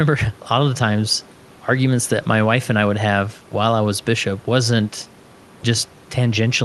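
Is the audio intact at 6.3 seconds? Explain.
Yes, the audio is intact at 6.3 seconds, with nothing beyond the quiet room noise about 28 dB below the speech and the normal band limit of the call path.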